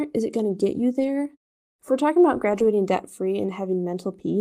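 At about 0.99 to 1.09 s, right after "to get you", the speech turns briefly rough and noisy without breaking, and the same grainy patch returns at 2.51 to 2.65 s, between "we're talking about" and "debt free". Both are a lost packet rebuilt from error correction: packets went missing, and the decoder played the low-bitrate backup copies carried in the following packets, rebuilding about 60 ms and then 80 ms.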